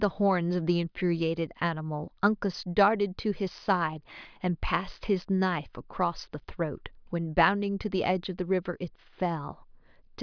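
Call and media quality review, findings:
Nothing to flag here, the speech comes through without any problems worth a ticket.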